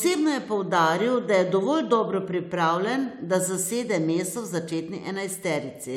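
Speech, with nothing technically wrong to be heard in it. No fault turns up anywhere, so there are no times or causes to report.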